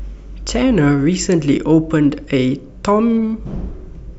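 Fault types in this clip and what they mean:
Dropped samples: a single sharp click at 3.30 s in this speech, where a tiny piece of the stream has gone missing and the waveform jumps straight from one value to a later one instead of moving smoothly between them. The gap is only a couple of samples, roughly a twentieth of a millisecond, far too short to remove any audible sound. The jump is likely the cause, and it shows as a thin vertical line across the spectrum.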